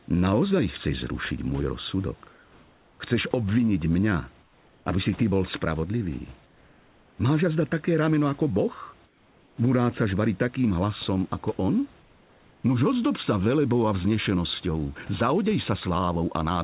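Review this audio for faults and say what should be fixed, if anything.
Comfort noise in place of the background at 2.32–3.0 s (after "chceš zrušiť môj"), 4.42–4.86 s, 6.46–7.18 s (after "si ty bol spravodlivý"), 9.06–9.58 s and 12.0–12.64 s (after "takým hlasom ako on"). In each pause the room background turns flat and featureless, about 3 to 4 dB quieter, until speech resumes, likely because discontinuous transmission stopped sending audio and the receiver synthesised noise. The G.711 A-law path cuts off everything above 4 kHz. Disabling DTX on the sender keeps the real background continuous.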